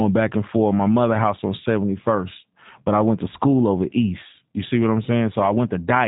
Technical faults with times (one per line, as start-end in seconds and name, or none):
0.00-6.07 G.729 codec